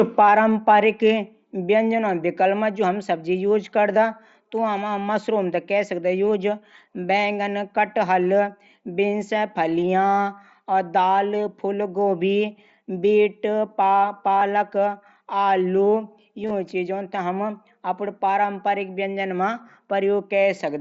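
This speech clip, carried over the mSBC wideband headset codec with its top near 8 kHz, has two short glitches: a nearly hidden one around 14.37 to 14.41 s, and a brief buzzy, held tone with a slight warble at 16.43 to 16.51 s. Both are concealed Bluetooth headset packet loss, with about 37.5 ms of audio lost in each event, scattered over 75 ms. The receiver patched each gap by repeating the best-matching recent waveform. The 22.5 ms run in the second event is what makes it audible.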